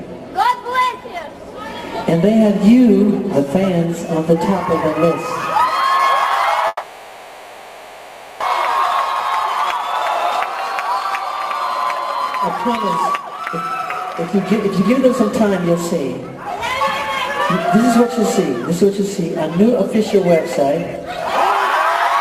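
A long network dropout, likely, runs from 6.67 to 8.44 s: the last sound is stretched into a fading buzz that dies to near silence, and when the audio resumes about one second of it is simply gone, leaving a jump of roughly 0.7 s. Jitter buffer speed-ups follow at 10.54–11.49 s (104 %), 11.96–16.57 s (113 %) and 18.63–19.96 s (104 %). The receiver drains its overfull buffer by cutting many tiny pitch-period slices, about 0.7 s in the middle stretch, so the sound runs faster at unchanged pitch and hurries along in the 113 % stretch.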